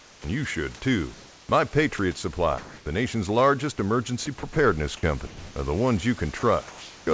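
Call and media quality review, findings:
Comfort noise in place of the background: 0.00–0.24 s, about 4 dB below the surrounding background; 2.58–2.86 s, just before "nation's largest", level unchanged; 6.39–7.07 s, after "are the ones". The room's textured noise floor turns smooth and steady. The likely cause is discontinuous transmission with receiver-generated noise. On the spectrogram, flat uniform texture replaces the grainy floor, capped at 8 kHz like the rest of the call path.

Onset clipped by the voice detector: at 0.21–0.24 s, the first 30 ms before "you should too" is missing. The word starts hard, with no soft attack. The likely cause is the sender's voice detector triggering late and noise filling the gap. On the waveform, the envelope jumps from the smooth floor to full level with no ramp. On the spectrogram, harmonics appear with a vertical left edge.

Sound dropped by the voice detector: at 1.98 s, about 10 ms of sound is lost. 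At 5.27–5.56 s, 130 ms of speech is gone inside a 290 ms fill. At 6.39–6.43 s, 40 ms is lost. The likely cause is the detector misreading speech as background. On the spectrogram, harmonic energy gives way to flat noise, then resumes. On the waveform, each dip flattens to steady noise.

Sound chopped by the voice detector: across 4.26–4.56 s, the sound is choppy, with about 80 ms in total swapped for fill. The likely cause is the detector toggling repeatedly. On the spectrogram, short vertical gaps of smooth noise cut through the harmonics. On the waveform, the envelope is notched more than once over 0.3 s.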